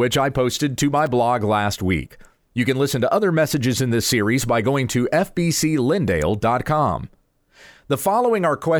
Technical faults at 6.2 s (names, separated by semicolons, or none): electrical switching spike